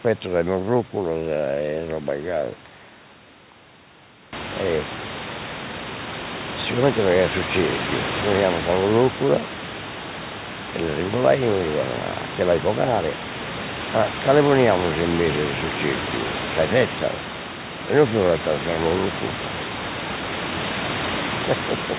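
No technical faults can be heard in this recording.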